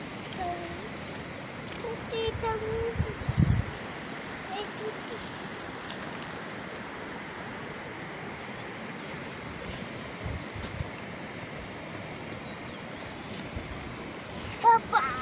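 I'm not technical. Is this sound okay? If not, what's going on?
Yes, this sound is okay. Nothing in it stands out as a problem that needs fixing.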